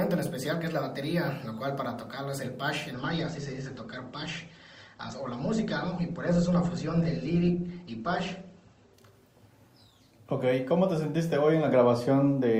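From 2.93 to 8.93 s an adaptive stream at a lower bitrate takes over: the treble vanishes above 8.2 kHz, fitting a step down from 64 to 16 kbit/s. Unlike a dropout, the switch is instant, gapless, and reverses.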